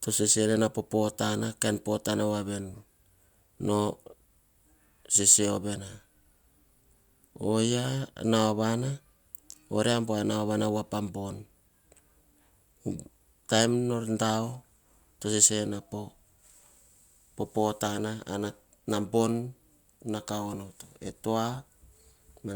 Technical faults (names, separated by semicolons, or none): none